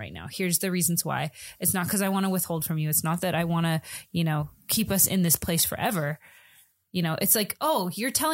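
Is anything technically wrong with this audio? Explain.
Yes. Pre-emphasis has been left on from 0.43 s to the end of the speech. The treble was lifted before storage and the matching de-emphasis was never applied. The shape of the lift fits the 50/15 µs CD emphasis curve. At 10 kHz the highs sit about 8 dB above the level at 1 kHz. The result sounds thin and overly bright. Sibilants hiss and stand out sharply.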